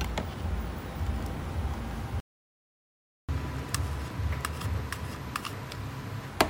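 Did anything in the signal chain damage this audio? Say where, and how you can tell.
Yes, at the playback stage. The sound stops abruptly at 2.20 s and stays silent until 3.29 s, a gap of about 1.09 s. This is a playback stall, likely the player starving for data. One long clean silence separates it from the brief, scattered gaps of packet loss.

From 3.29 to 6.29 s the player works off its backlog at 1.25 times normal speed, so the pitch rises by about four semitones, then both settle back. This catch-up at higher speed comes from plain resampling. A time-stretch would have quickened the tempo without lifting the pitch.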